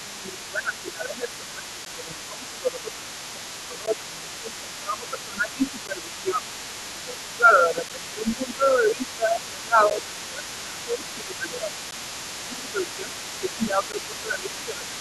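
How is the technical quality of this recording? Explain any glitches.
The recording has three recurring faults: the speech is repeatedly turned down, a faint second voice runs underneath it, and short holes open at regular intervals.

Speech suppressed in double talk occurs from 0 to 3.09 s, 3.33 to 6.47 s, 6.87 to 11.72 s, 12.47 to 13.13 s, and 13.40 s to the end. The speech sinks by about 15 dB in the first two stretches and about 10 dB in the later ones, and it sounds muffled or pumped down. The likely cause is an echo canceller that could not tell the talker apart from the far-end echo while both were active, so it attenuated everything. On a waveform the envelope sags across each span. A spectrogram shows the harmonics and upper bands fading.

The other side's voice leaking through runs the full clip as a faint second voice roughly 20 dB below the main speech. It is likely the far end's audio playing from a loudspeaker and reaching the microphone, where the echo canceller left a residue. 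It sounds like a distant voice in the background. A spectrogram shows a weaker, independent harmonic pattern overlapping the main one. The waveform shows a low-level floor of activity in the pauses.

A gap between chunks appears at 1.85, 3.86, 5.87, 7.89, 9.90, 11.91 and 13.92 s. Each is 12 ms of silence, recurring about every 2 s, which fits audio handled in 2-second chunks with padding or a late start at each join. No sound is lost, but each join produces a short hole. The waveform drops abruptly to near silence with hard edges, and a spectrogram shows thin, full-height vertical blank stripes.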